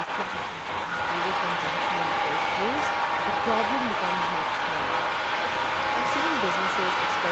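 From 0 to 0.23 s, and again from 1.01 s to the end, an echo leak is audible: a copy of the speech trails about 113 ms behind, roughly as loud as the original. A loudspeaker on the far side likely fed its microphone past an incomplete echo canceller. Unlike room reverberation, this is a distinct repeat rather than a smooth decay.

Between 0.25 and 0.94 s, speech is suppressed in double talk. The voice ducks by up to around 25 dB in pieces totalling about half a second, likely because the canceller turned down everything while both sides spoke.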